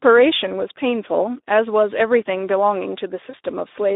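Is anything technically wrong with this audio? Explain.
Yes. Throughout, the Speex codec is starved of bits, which fits a low rate near 11 kbps, so this narrowband speech, confined to about 250 Hz to 3.7 kHz, sounds plainly hoarse and noisy. At 3.29 to 3.35 s, VoIP packet loss concealed by the speech codec means the decoder extrapolated its last pitch over a 40 ms gap, which fits two lost frames, stretching the voice out as it fades.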